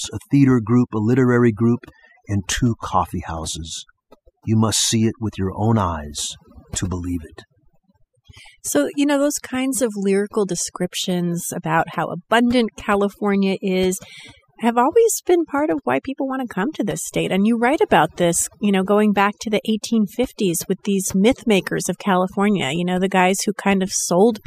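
From start to end, the background between phrases sinks to an unnatural near-silence dotted with twinkling specks, and the speech has its softer detail hollowed out. This is overdone noise removal: a noise reduction stage was driven too hard, so any frequency band sitting close to its noise estimate was pulled far down or shut off entirely, taking the quieter components of the speech along with the noise.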